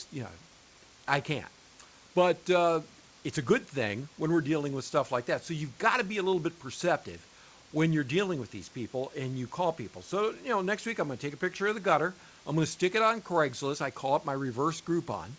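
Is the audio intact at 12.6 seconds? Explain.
Yes, the audio is intact at 12.6 seconds: the speech there passes through the G.722 call path as expected, with no dropout, glitch or other fault at that point.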